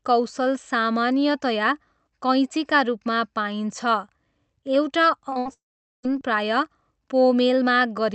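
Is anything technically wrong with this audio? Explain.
Yes. The speech breaks up over a short run between about 5.29 and 6.05 s, with four loss events close together. The call path underneath it has the usual coding texture and no content above about 8 kHz, which points to Opus at a moderate bitrate.

Short concealed packet loss occurs twice back to back, at 5.29 to 5.33 s and 5.33 to 5.37 s. In each, about 20 ms of audio failed to arrive in time. The decoder bridged each hole by extending the preceding sound, following its pitch where it was voiced and using shaped noise where it was not, then crossfaded back into the received signal. Each event is heard as a brief smear or wobble.

A burst of packet loss follows at 5.39 to 5.47 s, with about 60 ms missing. Here the concealment had to cover several packets' worth of gap, so the continued sound is stretched and attenuated as it goes. A voiced segment turns into a short held buzz, and an unvoiced one into a hiss that fades. 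The speech then picks up slightly further along, and the portion that fell inside the gap is simply absent.

A long network dropout is the likely cause of the break from 5.53 to 6.05 s, where about half a second of audio never played. Concealment extends the last sound only briefly before fading it out, leaving roughly 0.44 s of near-silence. Speech then resumes at a later point, and everything in the gap is gone.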